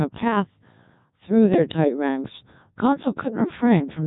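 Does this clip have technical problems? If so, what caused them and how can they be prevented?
Yes. Throughout the speech, a Codec 2 vocoder has rebuilt the voice from pitch, voicing and envelope data alone. This causes heavy, robotic buzz consistent with roughly 1.2 kbit/s. A spectrogram shows overly regular, smeared harmonics and nothing above 3.8 kHz. The waveform's true shape is lost. Prevent this by sending speech through a higher-bitrate waveform codec such as Opus rather than a low-rate vocoder.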